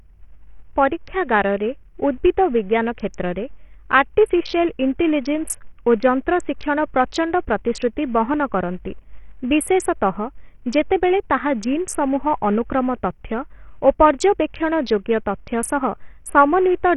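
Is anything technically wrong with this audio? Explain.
Yes. Across the whole speech clip the audio carries heavy Bluetooth SBC compression damage, likely from an SBC link running at a low rate. The damage points to roughly 48 kbps. With so few bits, the coder starves its upper sub-bands and quantises the rest coarsely. Nothing survives above about 11.9 kHz, the remaining treble flickers in and out, and a gritty, grainy noise with aliasing rides on the speech from start to finish.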